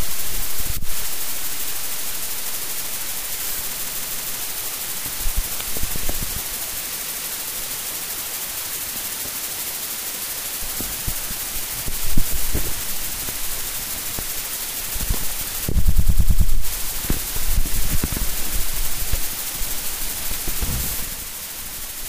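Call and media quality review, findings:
Stutter, a short block of audio replaying back to back: 3.75–4.38 s (157 ms block, four extra plays), 6.99–7.30 s (157 ms, two extra), 15.87–16.50 s (105 ms, six extra). Repeated frames, compressed frames re-sent or re-written upstream of the decoder; adds about 1.6 s overall.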